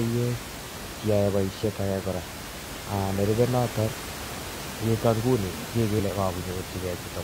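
At 1.60 to 1.64 s, and again at 5.95 to 6.01 s, short garbled bursts cut into the speech. Both come from damaged data in a compressed stream. The decoder misreads corrupted frames, loses sync, and hunts for the next valid header. Room noise sits about 10 dB below the speech.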